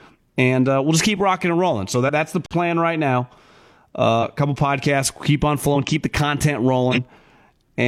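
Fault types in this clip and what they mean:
Compressed frames skipped: whole coded frames never play, so the speech jumps ahead about 50 ms before "that's the", about 100 ms near 4.2 s, and about 50 ms between "keep on" and "keep the content".
Underrun with held sample: the output ran dry at 2.46 s and held its last value for 46 ms, which fits a 2048-sample gap, a flat silence that resumes softly where it stopped.
Corrupt frame decoded: a damaged frame after "keep the content" is played anyway near 6.91 s, putting energy at wrong frequencies for roughly one frame.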